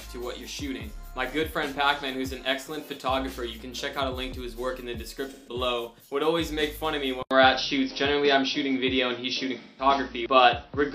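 There are two short AAC frame losses with concealment, at 5.30–5.54 s and 9.62–9.85 s. Each is a smeared, noisy patch of about 170 ms, consistent with four lost frames patched from the last good spectrum. From 7.23 s to the end, after an 80 ms gap, the audio turns dull with nothing above 5.9 kHz, a small level shift and new background hiss, likely an input switched to a poorer device.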